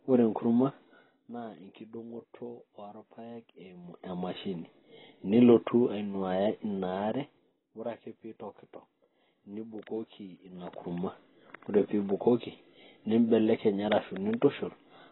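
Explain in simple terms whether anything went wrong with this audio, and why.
The whole speech recording sounds dull and badly warbly, with the crisp top end missing. That points to AAC compression, likely from squeezing the file too hard, rather than a simple muffled microphone.

Three times the level drops or rises in audible little ticks, called zipper noise: from 0.93 to 1.30 s, just before "na enkiding'oto"; from 7.06 to 7.71 s; and from 10.40 to 10.96 s. A clean fade glides. These move in steps.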